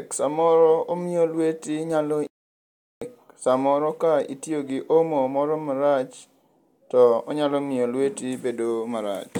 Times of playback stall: 2.27-3.02

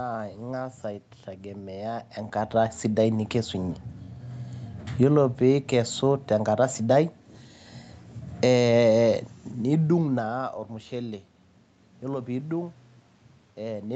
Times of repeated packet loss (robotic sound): none

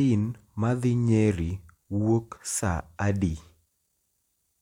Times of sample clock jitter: none

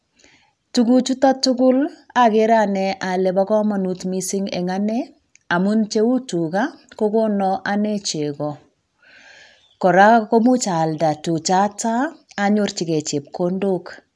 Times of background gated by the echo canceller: none

